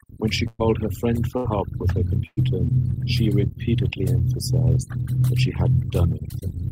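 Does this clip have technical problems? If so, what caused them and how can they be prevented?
Yes. Throughout the clip the background drops and breaks up into twinkling specks. This is overdone noise removal: the reduction was set so strong that any band close to its noise estimate was cut, taking quiet parts of the speech with it. Using a gentler reduction setting, or recording with less background noise, would prevent it.

At 0.47 to 0.61 s, 1.37 to 1.46 s and 2.26 to 2.39 s, the sound freezes into a held buzz or fading hiss for roughly 70 to 115 ms, then resumes further on. These are bursts of packet loss: about 80 to 120 ms of audio never arrived, so the receiver stretched and faded the last sound before skipping ahead. A steadier network connection, or forward error correction with a deeper jitter buffer, would prevent these gaps.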